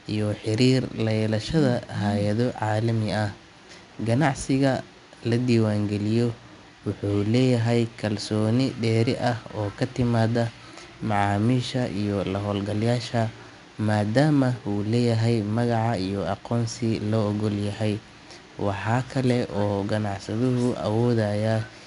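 From start to finish the speech carries 4-bit ADPCM compression. Each sample is coded as a coarse 4-bit step from a predicted value, and the step size adapts to the signal, so the quantisation error rides up and down with the level. It is plainly audible as a gritty hiss laid over every louder syllable, with roughness on sharp onsets where the step lags behind. Nothing is present above 10.6 kHz, which fits a data rate of around 89 kbps.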